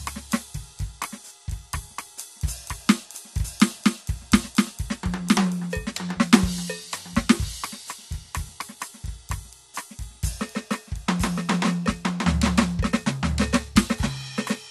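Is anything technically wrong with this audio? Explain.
Yes. Throughout the music, a doubled audio track plays a second, equally loud full-band copy about a second late, likely from a slower capture path. Unlike an echo, it has no decay or room colour.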